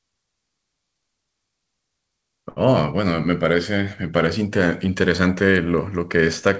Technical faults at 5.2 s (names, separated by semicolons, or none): none